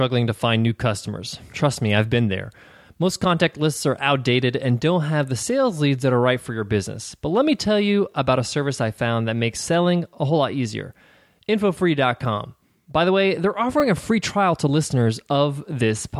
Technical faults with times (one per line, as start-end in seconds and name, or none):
8.12-8.14 repeated buffer
13.80 repeated buffer